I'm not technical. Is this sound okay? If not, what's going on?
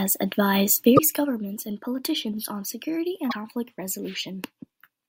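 No. There's damaged data in a compressed stream: bits of the file got corrupted, so the player briefly lost its place, causing short glitches at 0.95–1.00 s and 3.28–3.33 s.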